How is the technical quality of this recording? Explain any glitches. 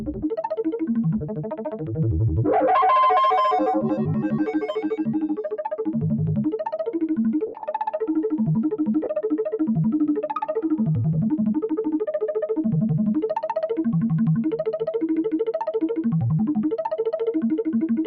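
The recording has been through a speech noise suppressor that should not be on this material, and it has two short Bluetooth dropouts. The light lossy coding underneath is faint by comparison.

Noise suppressor applied to music or sounds: Throughout, the suppressor treats steady and decaying parts of the sound as noise. Level swings by roughly 5 dB, so sustained material pumps and thins while sharp onsets pass. Unlike a dropout, nothing vanishes; the sound just breathes in level.

Sound cut by the noise suppressor: At 0.00–0.27 s, 1.23–1.87 s and 5.42–5.59 s the suppressor pulls specific stretches down harder, by up to about 9, 13 and 13 dB. Held portions and tails sink or are clipped short while attacks survive. The longest, at 1.23 s, lasts well over half a second.

Lost LE Audio frames: At 7.47–7.63 s about 120 ms of audio is lost, scattered over 160 ms, with the longest gap around 70 ms. 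At 9.04 s a further 30 ms is lost, which fits a few 10 ms frames. The LC3 decoder repeats the last spectrum with scrambled phase, so tones smear into noisy hiss and fade. This is a brief, grainy smear, not the slower level dips of the suppressor.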